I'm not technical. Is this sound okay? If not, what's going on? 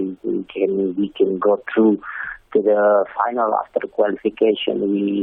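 Yes, it sounds fine.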